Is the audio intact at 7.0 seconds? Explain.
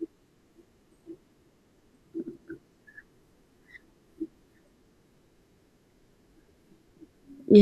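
Yes, at 7.0 seconds the speech plays through cleanly, with no dropout, click, distortion or other fault to be heard at that moment.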